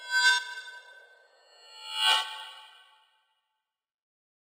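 Throughout, the top end sounds dulled, with a faint metallic shimmer from imaging from linear upsampling: straight-line interpolation from 12 kHz to 48 kHz leaves mirror images between 6 and 12 kHz, roughly 15 dB down.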